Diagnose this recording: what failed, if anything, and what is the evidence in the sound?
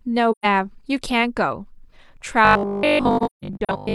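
AAC frame loss with muting at the codec/network stage: soft-edged holes at 0.31–0.46 s (about 128 ms, fitting three lost frames) and 3.17–3.7 s (about 300 ms scattered over 640 ms, longest gap around 150 ms). Zeroed spectra show as full-band blank columns with tapered edges.

Robotic sound from repeated short buffers from 2.45 s to the end: a rigid 50 Hz metallic buzz, likely a driver/buffer stage looping 20 ms chunks over most of the audio. Spectrogram shows evenly spaced 50 Hz harmonic stripes.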